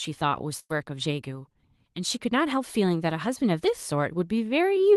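At 0.59 s a burst of packet loss drops roughly 100 ms of speech. The receiver stretches the last sound into a fading buzz or hiss until 0.71 s, then jumps ahead. A spectrogram shows smeared, repeating bands decaying beneath the call codec's 12 kHz ceiling, and the waveform shows a shrinking, looped envelope before an abrupt restart.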